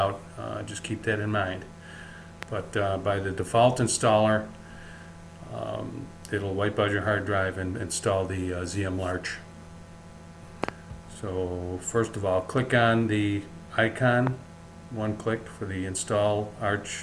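Loud pops land at 2.43–2.45 s, 10.64–10.71 s as a quick double, and 14.27–14.29 s, peaking roughly 15 to 20 dB above the sound. Each is a sudden voltage pulse, likely from a plug, switch or static discharge, heard as a sharp thump while the sound continues underneath.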